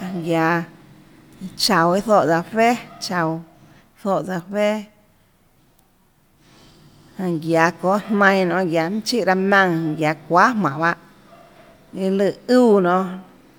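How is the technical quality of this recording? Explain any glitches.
Nothing here catches my ear as a glitch; I listened through the whole recording and there's simply nothing that stands out as a technical problem.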